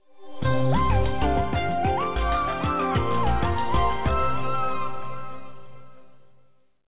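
No technical faults are audible.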